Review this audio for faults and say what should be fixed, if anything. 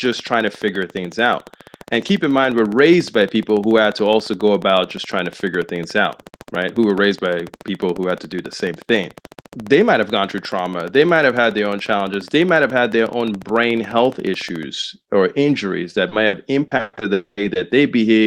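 A train of clicks runs from 0.06 s to 14.64 s, ending just before "or injuries that". The ticks are evenly spaced at about 14.1 per second, around 200 in total. They have a consistent shape and peak about 5 dB above the speech, so they stay audible through pauses. The regular, unchanging pulse shape points to a periodic external source, likely electrical interference from nearby equipment or a faulty connection or power supply injecting the same transient over and over. To prevent this, check grounding, cabling and the interface, and move the recording chain away from switching equipment.

Repeated packet loss (robotic sound) follows "or injuries that", from 16.09 s to 17.03 s. Seven separate holes occur, the longest 120 ms, with about 300 ms of audio missing in total. The receiver patched each hole by extending the preceding sound, so about 32% of this stretch is synthetic continuation. 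This gives a choppy texture with syllable fragments missing. To prevent this, improve link stability or enlarge the jitter buffer so late packets still arrive in time.

A long network dropout occurs from 17.13 s to 17.39 s. Roughly 240 ms of audio never arrived. The gap is first bridged by a fading continuation of the last sound, which decays into about 60 ms of silence before the real signal resumes. Nothing lost in that span is recovered. The pattern of a sustained gap right after a burst of losses fits a likely brief loss of connectivity rather than isolated packet drops. To prevent this, address the underlying network congestion or use redundancy such as forward error correction.

Short concealed packet loss appears at 17.53–17.57 s. About 20 ms of audio failed to reach the decoder and was filled by extrapolating the preceding sound, then cross-faded back into the real signal. It is heard as a brief smear rather than a clean gap. 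To prevent this, apply the same network and jitter-buffer fixes as for the earlier losses.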